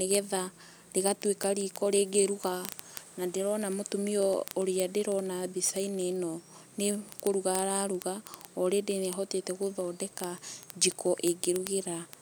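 A receiving device running on its own clock, not locked to the sender's digital link, drifts by roughly 700 ppm, so a sample is dropped or repeated at each slip. From 0.11 s to 12.21 s, these word clock ticks sound as some 300 sharp clicks of uneven strength, about every 40 ms, throughout the speech.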